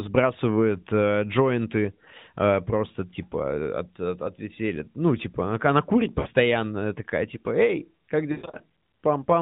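At 6.20 to 6.28 s, just after "типа она она курит", and again from 8.32 to 8.63 s, lost AMR speech frames leave the narrowband speech smeared. The decoder repeats its last good settings at falling gain. On a spectrogram the harmonics stretch flat and fade, and the waveform envelope sags toward silence. The first gap fits about three frames. The later one is scattered, with its longest run about 120 ms.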